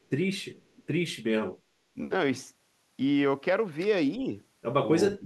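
At 1.94 to 1.98 s the speech dips sharply, by roughly 15 dB, for a brief moment. At 4.18 to 4.26 s it sags again, but only slightly, by a few decibels. From 5.16 s to the end it drops hard, by about 25 dB. These are cases of speech suppressed in double talk. The likely cause is an echo canceller that heard both sides at once. It turned the talker down along with the echo.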